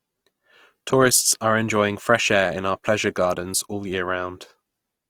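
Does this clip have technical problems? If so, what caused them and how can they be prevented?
Yes. Throughout the speech the sound is grainy, rough and noisy in texture. The likely cause is Opus compression in its music mode, which fits a rate near 24 kbps. It refills starved bands with folded or noisy content. Encode at a higher bitrate to prevent it.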